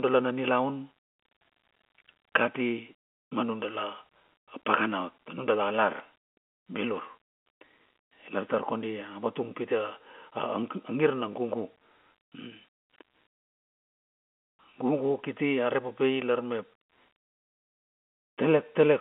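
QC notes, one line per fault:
5.97–6.00 s: packet loss with last packet repeated. About 30 ms, which fits one lost packet, was filled by replaying the previous packet, so it comes through as a small blip. Unlike a dropout, the gap is filled, not silent, and too short to buzz.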